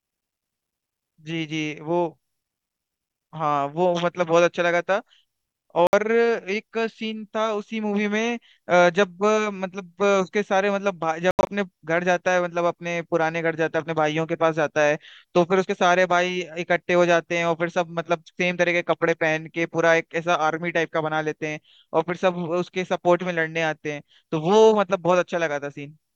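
At 5.87 s the speech cuts to silence for about 61 ms, and at 11.31 s it breaks up into short gaps totalling about 122 ms over roughly 160 ms, the longest 81 ms, each time resuming further on. This is likely a Bluetooth dropout, with late packets discarded.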